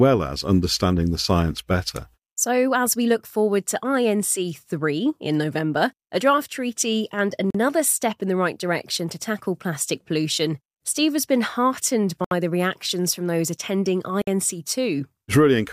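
The speech cuts to clean silence three times: about 41 ms at 7.50 s, 69 ms at 12.24 s and 55 ms at 14.22 s. Each is likely a Bluetooth stall, where held packets drained the headphone buffer. Unlike a clipped dropout, the speech then picks up again.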